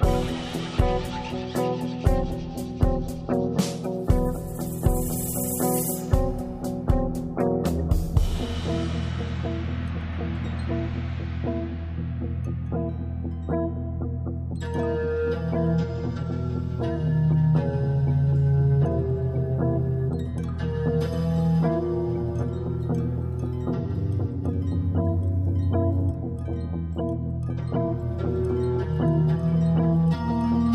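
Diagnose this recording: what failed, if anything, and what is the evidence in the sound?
No fault is evident at any stage of the chain, from the analogue wiring through the converter, buffering, format conversion, codec, network and storage to playback.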